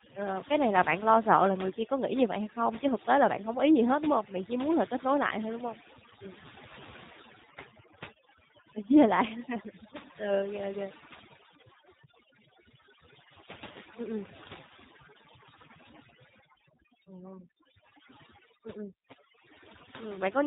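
Quiet word endings and soft consonants seem to dissolve, while the gaps between phrases drop to near silence flecked with twinkling specks. This is overdone noise removal. A noise reducer set too aggressively has pushed individual frequency bands down or off whenever they sat close to its noise estimate, so the lower-level parts of the voice were removed along with the background noise. Over the whole clip the speech is also band-limited and slightly rough and synthetic, with plainly audible coding damage and a warble on whatever residue remains. Nothing above 3.8 kHz gets through. These are the marks of the G.729 codec, a low-rate telephony coder that fits an 8 kbit/s stream. It rebuilds each 10 ms frame from a vocal tract filter, a pitch predictor and a handful of pulses, which is where the buzzy, artificial edge comes from.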